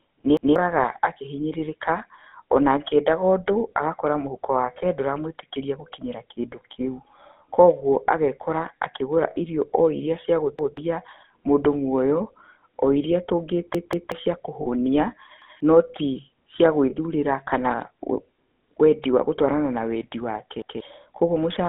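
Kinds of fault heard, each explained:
GSM full-rate codec: The whole clip has gone through the original GSM codec at 13 kbps. It rebuilds speech from a vocal-tract model driven by a sparse pulse train, so voices come out buzzy and gravelly. The line band runs from about 200 Hz to 3.5 kHz, which leaves everything thin and boxy with no top end. The codec damage is plainly audible all the way through.
Repeated buffer: This happens when fresh audio doesn't turn up in time and the device plays its last chunk again, so you hear a short stutter with a hard join at each repeat. The repeats here are about 186 ms long, which fits an 8192-sample buffer. There are single repeats at 0.37, 10.59, 15.42 and 20.62 s. At 13.75 s the same piece plays twice more, which stretches the stutter to about 0.37 s.
Lost GSM frames: When frames arrive corrupted, the decoder keeps reusing the last good frame's settings, so the sound hangs as a rough, metallic ring instead of cutting out. 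There are three short ones. At 9.30 s it lasts about 60 ms, which is three frames' worth. At 14.62 s it lasts about 40 ms. At 16.9 s it's a single 20 ms blip.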